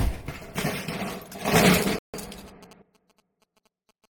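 From 1.06 s to 4.06 s there's GSM signalling interference: a nearby 2G phone's radio bursts get rectified into a galloping dit-dit-dit of short buzzes at roughly 217 Hz, sitting well below the main sound.

At 1.45 s the whole thing, background noise included, jumps up by about 13 dB in one step and stays there until 2.82 s. That's a sudden gain jump, likely a digital gain change applied without any ramp.

Inside that louder stretch, at 1.99 s, there's a rebuffering stall. The player ran dry, so the audio drops to silence and picks up exactly where it left off at 2.14 s, adding about 0.15 s.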